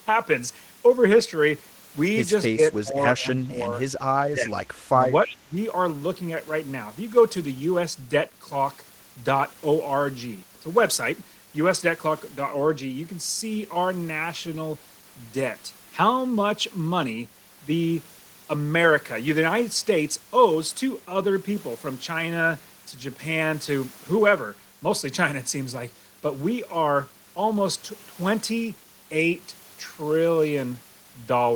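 An echo canceller likely mistook overlapping talk for echo, causing speech suppressed in double talk: the speech dips by up to about 25 dB at 2.53, 2.77, 3.15, 4.3 and 4.92 s. At 5.29 to 5.36 s, an echo leak lets through a faint copy delayed by 323 ms, about 15 dB below the speech.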